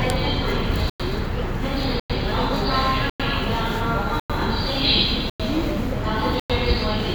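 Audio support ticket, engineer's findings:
Hard-edged 100 ms silent holes at 0.90, 2.00, 3.10, 4.20, 5.30, 6.40 s. Gap between chunks: each 1 s chunk is followed by inserted silence, so the audio is paused at each join rather than lost.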